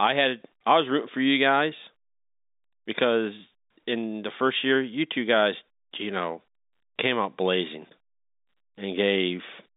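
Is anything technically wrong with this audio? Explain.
No, nothing in this speech clip points to a technical fault. It carries the sound of an ordinary fixed-line telephone call in G.711 coding, with the band running from about 200 Hz to 3.7 kHz and any quantisation noise from the 8-bit logarithmic scale faint at most.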